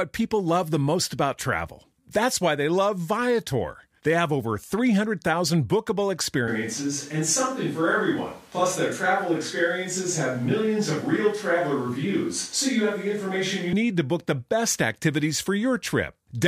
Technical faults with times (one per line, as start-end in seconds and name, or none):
6.48-13.73 switch to a distant microphone